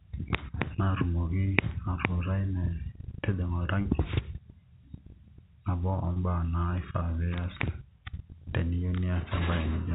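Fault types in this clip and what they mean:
Clock slip clicks: Two devices likely run on separate, unsynchronised clocks differing by around 30 ppm, so one sample is dropped or repeated each time the drift adds up to a whole sample. Here that produces faint, single-sample ticks roughly every 0.7 s, around fifteen of them, spread from 0.26 s to 9.43 s across the speech. They are regular enough to sound like a slow, quiet ticking beneath the talker.
Packet loss with pitch repetition: A burst of packets went missing, and the receiver filled the hole by repeating the last pitch period of the speech instead of leaving silence. Each gap here lasts 30 ms, which fits three 10 ms packets, at 3.82 s and 6.13 s. Because the gaps are short, the concealment never fades to silence. Each one sounds like a brief, slightly held, buzzy moment in the voice before normal speech resumes.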